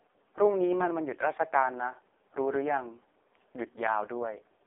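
From start to finish the speech has passed through the AMR narrowband mobile codec in its harshest setting, which fits the lowest AMR-NB mode of 4.75 kbps. At that rate the vocal-tract model gets too few pulses per frame, so the voice comes out buzzy and synthetic, with heavy codec damage. The phone-line band runs from 300 Hz to 3.6 kHz, and nothing above 3.7 kHz survives, leaving the sound thin and muffled.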